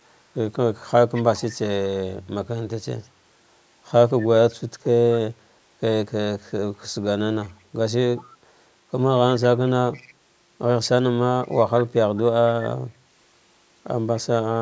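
Echo leak occurs at 1.14–1.59 s, 3.02–3.07 s, 4.51–5.19 s, 7.43–8.24 s and 9.41–12.22 s. A faint copy of the speech trails 209 ms behind, about 20 to 25 dB down, and about 40 dB down at 3.02 s. The likely cause is an echo canceller passing residual loudspeaker pickup back into the call.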